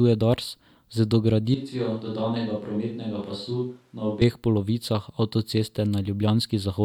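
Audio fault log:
1.55–4.21 s, switch to a distant microphone: the speech turns abruptly roomy and hollow, thinner in the low end, and drops by roughly 10 dB, with room noise rising to around 40 dB below the speech. It snaps back just as suddenly at 4.21 s. The likely cause is the close microphone dropping out and a farther one carrying the signal. A plain gain dip would not add room tone, and added reverb would not thin the bass.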